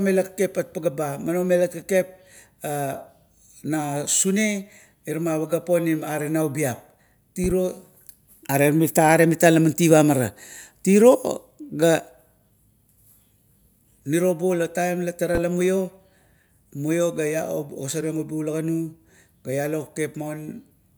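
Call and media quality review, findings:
Loud pop at 7.44–7.54 s (double) and 15.35–15.39 s (single), roughly 5 and 10 dB over speech; likely voltage transient from plug, switch or static.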